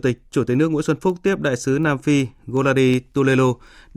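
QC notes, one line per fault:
0.18–3.85 s, word clock ticks: sharp ticks of uneven strength recur at a steady rate through the speech, about one every fifth of a second, some twenty in all. The receiving clock runs roughly 100 ppm apart from the sender's, so each slip misreads samples and drops or repeats a single one.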